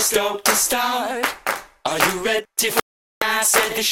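A digital broadcast dropout at 2.80 to 3.22 s: the receiver stopped getting valid frames and muted, leaving 0.42 s of silence before the sound returns.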